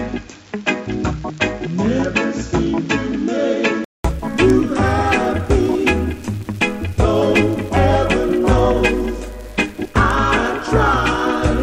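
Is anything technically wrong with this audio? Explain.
Yes. From 0.0 to 4.05 s the sound is dull and boxy, with nothing above 7.4 kHz and background noise roughly 30 dB below the signal. A 200 ms silence follows, then fuller sound returns at much the same loudness. This is likely an input switched to a poorer device, a narrower-band microphone with its own noise floor. On a spectrogram, energy stops at a hard 7.4 kHz ceiling until the gap. The waveform shows a brief flat dropout there, with no level step.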